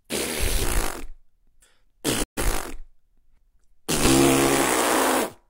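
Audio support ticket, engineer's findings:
Digital broadcast dropout, 2.22–2.42 s: 20 ms fade to silence, then return. Flat waveform, full-band spectrogram gap. Receiver muting on failed frames, roughly three lost.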